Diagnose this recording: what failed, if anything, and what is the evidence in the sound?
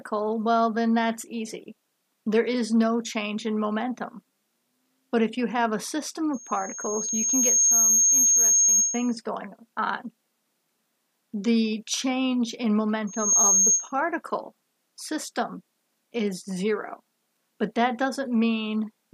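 What failed is the acoustic loop on the analogue side: a loudspeaker feedback squeal. A pure tone near 6.5 kHz swells up over a second or so from 6.33 s, sits well above the programme, and drops out at 9.19 s. It returns more briefly from 13.07 to 13.93 s, ramping up much faster and a bit lower. The mic is hearing its own speaker, and at 6.5 kHz the loop gain tops unity, so that tone keeps feeding itself.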